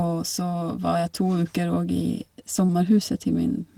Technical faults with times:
2.65-2.71 short concealed packet loss
2.69-2.75 lost packet rebuilt from error correction

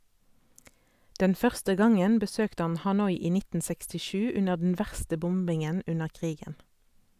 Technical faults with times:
none

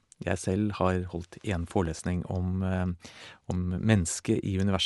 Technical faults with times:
0.00-4.85 Bluetooth LC3 compression
1.59-1.99 CD scratch ticks

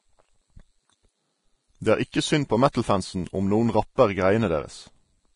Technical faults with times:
0.00-5.36 Vorbis compression
2.12-2.14 pre-echo
2.72-2.75 pre-echo

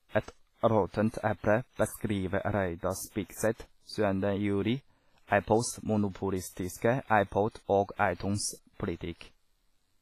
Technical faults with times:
0.00-10.02 WMA compression

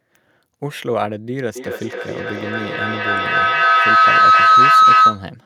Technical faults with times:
1.55-5.36 feedback howl

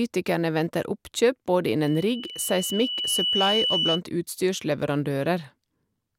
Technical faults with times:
1.84-4.01 loudspeaker feedback squeal

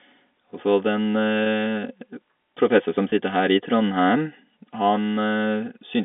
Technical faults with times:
3.10-3.12 packet loss with pitch repetition

